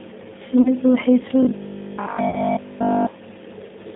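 G.729 codec damage runs through the whole speech clip: the band is confined to roughly 150 Hz to 3.7 kHz, which fits the 8 kbit/s codec rebuilding each 10 ms frame from a filter, pitch predictor and sparse pulses. The result is a plainly rough, synthetic quality.

VoIP packet loss concealed by the speech codec appears from 0.62 to 0.68 s. About 30 ms of audio, consistent with a single lost packet, was filled by the decoder extrapolating its last pitch and filter at falling gain, producing a brief, fading smear before the speech recovers.

Robotic sound from repeated short buffers covers 1.43 to 3.07 s. Essentially all of the sound there takes on a rigid, metallic 50 Hz buzz that loosely tracks the speech. The likely cause is late-arriving audio being padded by looping the last 20 ms of buffer while the real audio is skipped.

VoIP packet loss concealed by the speech codec returns from 2.30 to 2.40 s, inside that buzzing stretch. 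Another roughly 30 ms gap, again fitting one lost packet, is bridged by the decoder's extrapolation, and the weakened, distorted sound lingers past the gap itself.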